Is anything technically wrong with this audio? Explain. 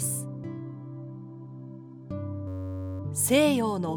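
Yes. From 2.48 to 3.00 s there is a system hang loop. The computer or its audio driver stalled, but the sound hardware kept replaying the same small stretch of its ring buffer instead of receiving fresh audio. That stretch is 10.67 ms long, which fits a 512-sample buffer, and it repeats about fifty times. Because the loop is so short, the sound freezes into a steady, flat buzz at 93.8 Hz for about half a second.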